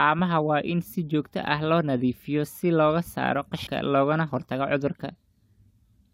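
At 3.66 s, between "nadiifiyaa si looga saaro" and "loogana hortago", damaged data in the compressed stream makes the decoder misread a frame and resync, giving a brief glitch of about 13 ms.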